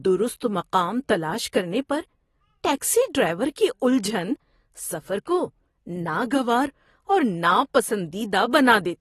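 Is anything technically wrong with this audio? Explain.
Yes. AAC compression runs throughout: nothing is present above 12.5 kHz, and the speech sounds dull and smeared, with a warbling, fizzy edge on sibilants. The likely cause is AAC-LC at a low bitrate, around 32 kbps, which removes the top band and coarsely quantises the remaining frequency lines.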